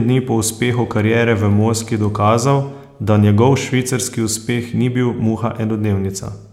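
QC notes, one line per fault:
No faults are audible in the speech. Nothing here calls for a QC entry.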